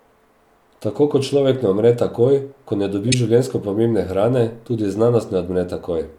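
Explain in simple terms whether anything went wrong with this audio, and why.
At about 3.08 to 3.14 seconds, right after "umre takoj ko ne" and before "življenjsko pomembne hrane tudi", the speech has a corrupt frame decoded. A couple of compressed audio frames were damaged, and the player decoded them anyway, so sound landed at the wrong pitches for that short moment and came out as a chirp, blip or burst of noise. A lost frame would leave a brief gap or smeared filler instead. This is an added, out-of-place noise.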